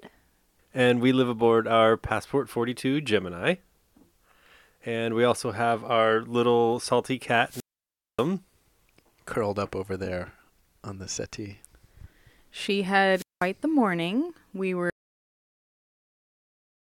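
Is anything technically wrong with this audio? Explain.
Yes. The speech has two wireless microphone squelch dropouts and then an audio dropout to silence.

The first squelch dropout runs from 7.45 to 8.28 s, just after "have our little salty". The second runs from 13.12 to 13.49 s, just before "the morning". In each, the radio link from the FM microphone weakens and the receiver's squelch shuts the output. Hiss or static rises briefly. Then comes a hole of near silence, about 585 ms the first time and about 193 ms the second. The voice then returns.

At 14.90 s the sound cuts off in mid-flow. Complete silence follows to the end of the clip, with no room tone. The input was likely lost, through a disconnected device, a failed link or a stray mute, while the recorder kept writing silence. Anything spoken after that point is gone.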